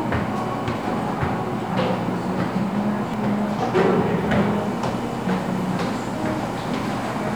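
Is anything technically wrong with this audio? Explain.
Yes. At 3.14 s, compressed frames are skipped. Roughly 0.4 s of the everyday sound goes missing, consistent with about four frames of around 93 ms that the decoder never played. The audio jumps ahead at that point by the length of the missing frames.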